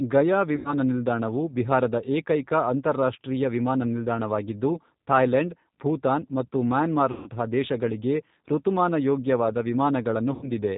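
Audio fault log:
throughout G.729 codec: The speech was carried by a low-rate coder that rebuilds each 10 ms stretch from a vocal tract filter, a pitch predictor and a few pulses rather than sending the waveform itself. The damage is plainly audible: nothing above 4 kHz survives, so sibilants lose their edge, and the voice has a rough, slightly synthetic grain. That points to an 8 kbit/s G.729A stream.
0.56–0.74 s, 7.11–7.29 s, 10.33–10.51 s VoIP packet loss concealed by the speech codec: Packets went missing, about 90 ms, 150 ms and 90 ms of audio respectively, and the decoder filled each gap by extending its last pitch and filter while lowering the gain. Each patch sounds like a smeared, buzzy tone or coloured noise that fades. The first ends just before "ನಿಲ್ದಾಣವು ಬಿಹಾರದ ಏಕೈಕ ಅಂತಾರಾಷ್ಟ್ರೀಯ", and the second falls between "ಥಾಯ್ಲೆಂಡ್ ಭೂತಾನ್ ಮತ್ತು" and "ದೇಶಗಳಿಗೆ ಋತುಮಾನಯೋಗ್ಯವಾದ". Because each frame builds on the previous one, the voice stays weak and distorted briefly after each gap.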